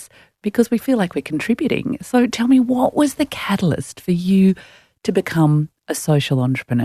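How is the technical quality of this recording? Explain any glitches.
No glitches can be heard anywhere in this speech recording. There is nothing in the audio that calls for an explanation.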